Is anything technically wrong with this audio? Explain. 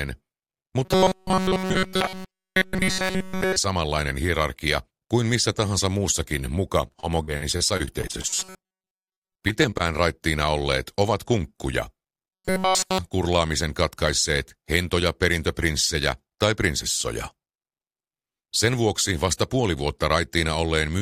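Yes, the audio has two kinds of fault, and they overlap once.

Robotic sound from repeated short buffers appears from 0.85 to 3.56 s, again from 8.30 to 9.38 s, and from 12.33 to 12.98 s. In each stretch the sound hardens into a rigid, metallic buzz fixed at 188 Hz. It still loosely traces the original contour but loses its natural movement. The first and last stretches are buzz throughout. In the middle one the buzz covers most of the stretch. The likely cause is the playback side receiving new audio too rarely and looping its last fragment to fill the time while fresh material is skipped. A loop repeating at 188 Hz points to a fragment of roughly 5.3 ms, and that repetition rate is what imposes the buzz pitch.

Repeated packet loss, heard as robotic sound, runs from 6.87 to 9.85 s. The audio turns choppy and mechanical, with many brief holes in quick succession, none longer than 38 ms. 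Each hole is patched by stretching the preceding sound forward. About 504 ms was filled this way, roughly 17% of the stretch, and about 540 ms of original audio is missing in total. From 8.30 to 9.38 s the buffer-repeat buzz sits on top of this choppiness.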